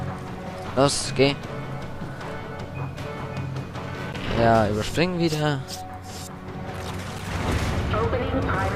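The audio drops into blocks of digital silence twice, about 13.5 ms at 4.13 s and 7.3 ms at 7.19 s, each heard as a tick or dip, likely from an unfilled output buffer.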